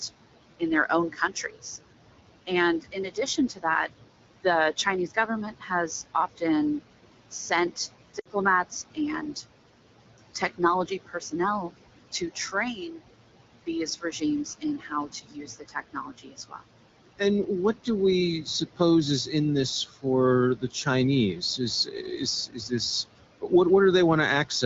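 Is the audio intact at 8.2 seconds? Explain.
No. From 8.19 to 8.27 s there are lost AMR speech frames: about 60 ms of speech, which fits three 20 ms frames, failed at the decoder. It replayed the last good pitch and vocal tract settings at falling gain, so the sound briefly smears and fades rather than clicking or cutting abruptly as a dropout would.

This moment also falls within the long stretch from 7.71 to 23.51 s where the noise suppressor cuts speech, about two seconds in total. It mistakes soft parts of the speech for noise and pulls them down by as much as about 16 dB, so they sound swallowed. This fault dulls the sound, whereas the lost frames smear it.

Noise suppressor artifacts run under everything, including this point. The background is cut by about 17 dB between phrases and returns beneath them. That rise and fall follows the level of the speech, not a single event, which separates it from the frame loss.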